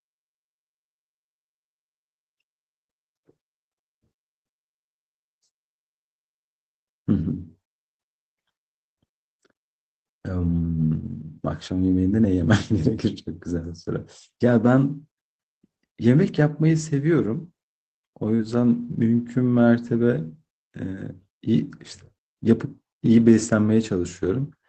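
At 18.35 to 18.41 s the speech shows a short concealed packet loss. About 40 ms never arrived in time, and the receiver covered roughly 35 ms of it by extending the preceding sound, so this stretch is a brief smear or wobble. That continuation of what came just before is what marks it as concealment rather than a rebuilt frame.

At the tail of that same stretch, 18.39 to 18.41 s, and again at 19.83 to 19.89 s, there is a lost packet rebuilt from error correction. Here the Opus decoder played low-bitrate copies carried in the following packets, about 20 ms and then 40 ms, the second fitting two frames. Nothing is invented, so there is no smear, only a rougher, noisier patch over the Opus coding of the 8 kHz-limited call.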